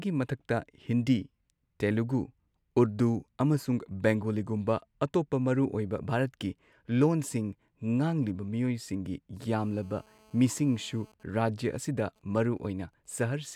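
From 9.59 to 11.12 s, a GSM phone buzz sits under the speech. A nearby 2G phone on a call transmits in bursts 217 times a second. The audio circuit rectifies those radio pulses. The result is a steady, raspy 217 Hz buzz, about 31 dB below the speech.

From 11.13 to 13.42 s, the buzz gives way to GSM signalling bursts. The phone is still on the call, but its user has gone quiet, so it sends only short groups of bursts. These come through as faint, even ticks with a longer 217 Hz buzz twice a second, roughly 40 dB down.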